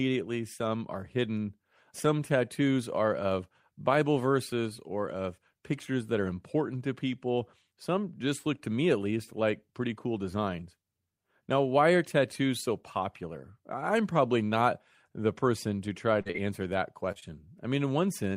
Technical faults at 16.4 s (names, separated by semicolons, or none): short concealed packet loss